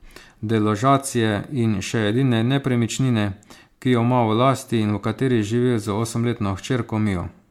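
Throughout the speech, the sound is swirly and hollow, with smeared consonant attacks and nothing above 19.7 kHz. This is generation loss, likely from repeated MP3 encoding, around four passes consistent with 96 kbit/s, each requantising on a shifted frame grid so artefacts accumulate.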